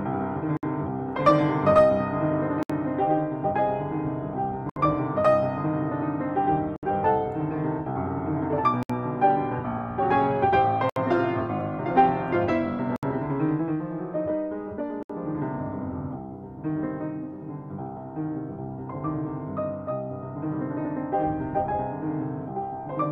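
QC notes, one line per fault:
0.57, 2.63, 4.70, 6.76, 8.83, 10.90, 12.96, 15.03 s: gap at a join of encoded pieces. Abrupt 59–67 ms gaps, edges smeared, then sound resumes. Separately encoded 2 s pieces were joined with encoder delay and padding untrimmed.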